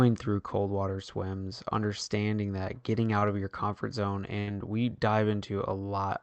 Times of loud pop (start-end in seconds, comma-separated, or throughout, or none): none